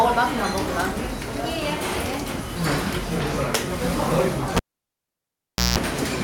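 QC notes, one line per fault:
4.56–5.78 s, cable pulled and plugged in: a pop, about 1.17 s of near silence as the live lead leaves the jack, then about 0.18 s of 60 Hz mains buzz while only the tip makes contact, and a second pop as sound returns. The pops and buzz set it apart from a clean digital dropout.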